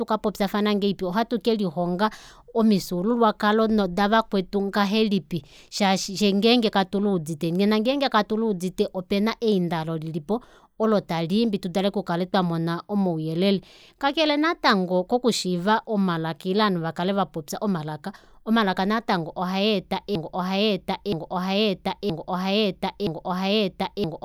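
A broken-record loop takes over this speech clip at 20.15 s: a 0.97 s fragment repeats exactly four times to the end, likely from a stalled player or stream.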